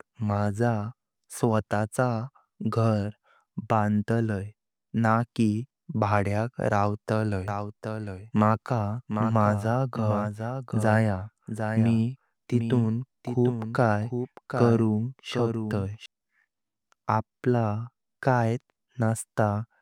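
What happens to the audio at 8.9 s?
At 8.9 s the speech is running over a doubled audio track, heard from 7.48 s to 16.06 s. A second full-band copy trails the original by roughly 0.7 s at about 5 dB lower, likely from the same signal being captured again through a slower path. Unlike an echo or room reverb, the copy has no decay and no added room colour, and it switches on and off abruptly at the span's edges.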